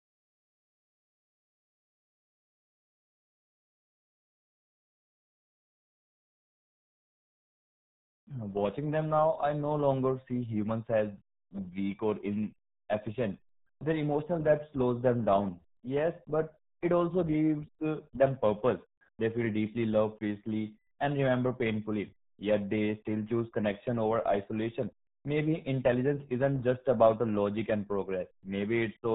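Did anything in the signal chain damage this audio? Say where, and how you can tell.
Yes, at the codec stage, throughout the speech: the RealAudio 14.4 codec. Nothing passes above 3.8 kHz, and the speech sounds heavily muffled and gargly, which fits an 8 kbit/s dial-up-era coder that discards the upper band and coarsely models what remains.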